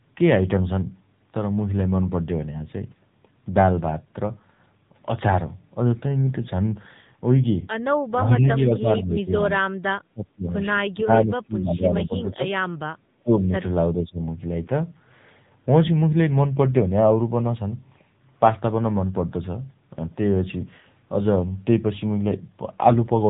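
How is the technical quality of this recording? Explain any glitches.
The quality is poor: the speech has mobile-codec damage throughout, and it repeatedly drops out in the middle of the clip.

The AMR narrowband mobile codec affects the whole recording. The codec models the vocal tract and excites it with only a few pulses per frame, so the speech sounds buzzy and synthetic. The level of damage fits a low rate of around 8 kbps. Nothing above 3.8 kHz survives, and a spectrogram shows a hard ceiling there.

Speech is suppressed in double talk at 8.19–9.83, 10.08–10.55, 11.0–12.49, 12.95–13.04, 13.23–13.51 and 13.94–14.2 s. The likely cause is an echo canceller that mistook overlapping far-end speech for echo and ducked the talker. The voice sinks by about 15 to 30 dB. The waveform shows sudden notches in the envelope at those times.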